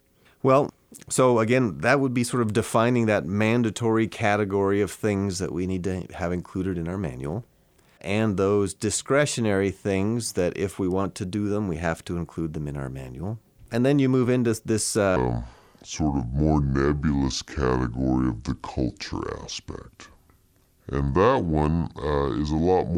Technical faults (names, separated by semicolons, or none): section at the wrong speed